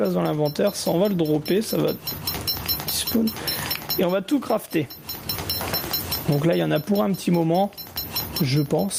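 Gain pumping runs through the whole clip: the level is pulled down each time a loud sound arrives and climbs back once it passes, a swing of around 20 dB. The likely cause is input gain set far too high, with a fast limiter or compressor clamping every loud moment, which squashes loud and soft parts closer together. Unlike a noise gate, which shuts off the quiet gaps, pumping keeps them audible and rides the level up and down with the loud sounds.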